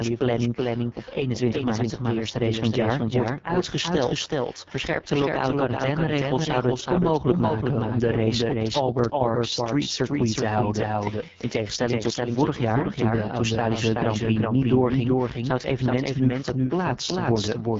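Speech, and it's carrying a doubled audio track the whole way through: a second full-band copy trails the original by roughly 0.4 s, sitting about 5 dB down, with no reverb tail or room colour on it, so it's a clean echo. Most likely the same signal was captured again through a slower path. On top of that, the AMR wideband (HD Voice) codec has chewed it up badly: it's rough and raspy, with nothing above about 7.4 kHz and a noisy top band, which fits the lowest AMR-WB rate, around 6.6 kbit/s.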